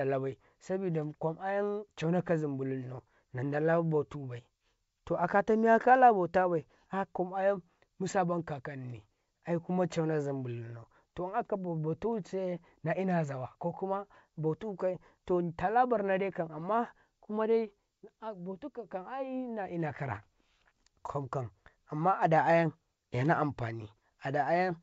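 A short pop and rough, uneven burst cuts through the speech from 16.58 to 16.67 s. These are bit errors on an ADPCM link. Rare flipped bits knock the decoder's step size off, so the disturbance rings briefly.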